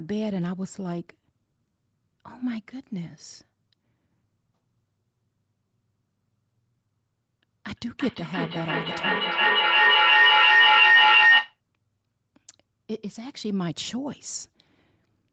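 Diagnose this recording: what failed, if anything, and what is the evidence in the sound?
Feedback howl is the failure here, arising acoustically between two devices sharing a room on the same call. From 7.72 s to 11.6 s a tone near 2 kHz swells to about 12 dB above the speech, pulsing roughly every 300 ms. Each pass from loudspeaker back into the microphone returns the sound louder than before, so the repeats grow and narrow onto the frequency the loop favours. The pulse rate reflects the loop's round-trip delay.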